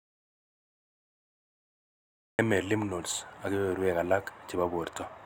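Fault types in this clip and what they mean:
Audio dropout to silence: The clip opens in silence. There is no room tone. This silence is already under way from the first instant and lasts to about 2.39 s. Speech then comes back abruptly, mid-flow, on "lymph nodes ak". The cause is likely a lost input, such as a disconnected device, a failed link or a mute, while recording continued. Whatever was spoken during that gap is lost.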